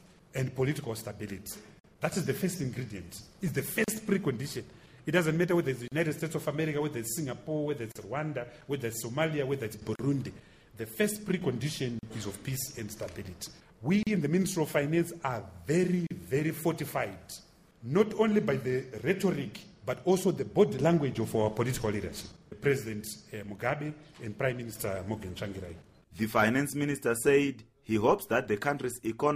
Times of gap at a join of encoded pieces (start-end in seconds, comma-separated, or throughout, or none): 1.79-1.84, 3.84-3.88, 5.88-5.92, 7.92-7.95, 9.95-9.99, 11.99-12.03, 14.03-14.07, 16.07-16.10